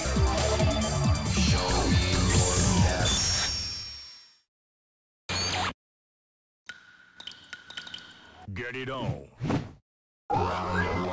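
No technical fault can be heard anywhere in the audio, and the signal holds steady throughout without any disturbance to its level, timing or continuity.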